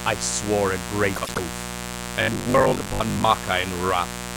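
A raspy mains buzz built on 60 Hz harmonics runs throughout, fairly loud against the speech; its spiky, edgy texture separates it from a smooth hum. From 1.15 to 1.38 s, frames out of order: two neighbouring blocks of about 96 ms swap places, giving a garbled flutter but no lost time, unlike a dropout. From 2.22 to 3.28 s the speech turns into a rigid metallic drone fixed at 50 Hz, robotic sound from repeated short buffers. This is likely caused by 20 ms chunks being replayed while about half the real audio is skipped. Unlike the mains buzz, this drone tracks the speech's rhythm and stops when the stretch ends.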